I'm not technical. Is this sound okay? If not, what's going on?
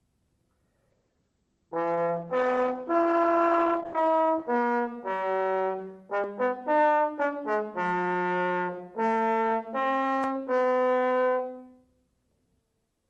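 No. From 0.9 to 5.43 s there's a call bitrate drop. The call had less data to work with, so the sound turns rougher and duller, losing its top. Unlike dropouts, nothing cuts out. It stays continuous, then clears.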